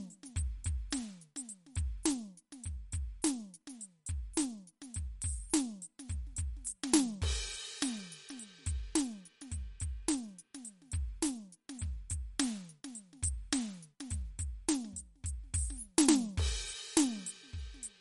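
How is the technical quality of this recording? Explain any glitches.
The technical quality is poor: compression damage runs through the whole music clip. Throughout, MP3 compression is the likely cause of a watery, swirling texture. The encoder, starved at what sounds like about 49 kbps, drops weak frequency lines and removes all content above 11.2 kHz. On a spectrogram this shows as a hard flat ceiling and flickering holes, with smeared transients in the waveform.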